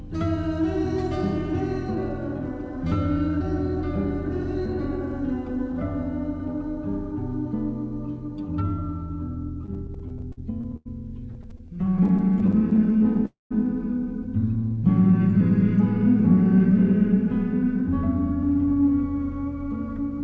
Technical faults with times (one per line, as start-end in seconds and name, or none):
9.66-10.87 repeated stalls (stutter)
11.31-13.20 repeated stalls (stutter)
13.26-13.53 call audio freeze
14.57-15.39 jitter buffer slow-down
17.13-17.90 jitter buffer speed-up